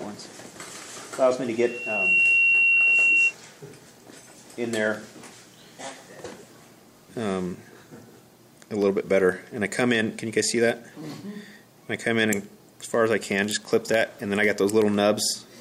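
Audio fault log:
1.57 to 3.34 s, loudspeaker feedback squeal: a single tone at 2.7 kHz swells up over roughly half a second and ends up sitting around 5 dB above the rest of the sound before it cuts off. That's the mic hearing its own speaker, and at that one frequency the loop gain has crept past unity, so the tone just keeps feeding itself until something breaks the loop.
4.82 to 15.44 s, periodic USB or driver dropouts: a steady tick every 0.125 s, about a hundred in all. Each one is a tiny gap, a fraction of a millisecond, filled with silence, so you hear it as a sharp click only while there's signal underneath. That rock-steady eight-per-second spacing points to some background task stalling the USB bus or audio driver on a fixed timer.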